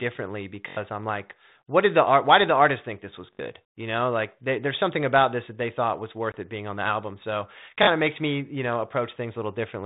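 Speech carried over a telephone-band line, with G.726 ADPCM coding at 32 kbit/s passing roughly 150 Hz to 3.7 kHz, shows two fault types. A repeated buffer causes short stutters at 0.68–0.77 s (just before "I'm like what did"), 3.33–3.39 s, and 7.83–7.87 s (just before "of makes me you"). In each, a 21.3 ms slice, which fits a 1024-sample buffer, plays again with hard joins: four extra times, then three, then two. About 100, 70 and 40 ms of audio are lost. Packet loss on an ADPCM call appears at 6.32–6.35 s, between "that they thought was" and "it being on the". Roughly one packet's worth, 20 ms, drops to a hard-edged gap. The decoder's predictor and step size then no longer match the sender's, so the return is slightly distorted before settling.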